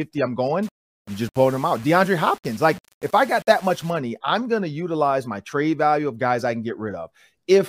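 It's a speech clip, and from 0.63 to 3.90 s it turns grainy in a way that tracks the voice, gritty on quiet bits, with the grit sitting around 25 dB down. That's likely low bit depth without dither, fitting roughly 7-bit rounding.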